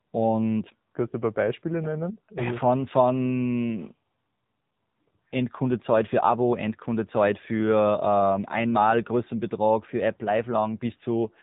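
A speech recording carrying AMR narrowband mobile codec damage throughout: the voice sounds buzzy, thin and synthetic, which fits a low AMR-NB mode near 7.4 kbps. On a spectrogram everything stops flat at about 3.8 kHz, with smeared, blocky harmonics below.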